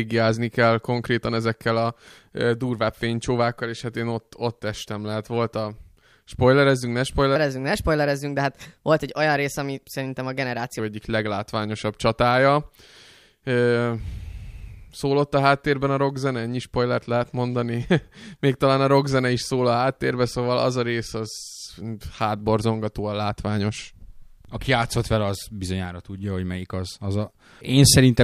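A section at the wrong speed runs from 7.36 to 10.79 s in this speech recording. Across that stretch the audio plays about 1.18 times too fast, so pitch and pace rise together: the voice jumps up by roughly three semitones and sounds hurried, then drops back to normal at 10.79 s. The likely cause is that this segment was played back or edited against the wrong clock rate.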